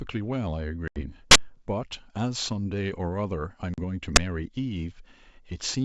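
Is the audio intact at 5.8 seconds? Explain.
Yes, the speech is intact at 5.8 seconds, with no fault in the G.722 wideband telephone coding at that moment.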